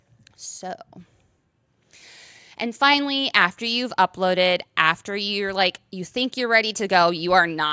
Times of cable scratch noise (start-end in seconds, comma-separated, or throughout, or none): none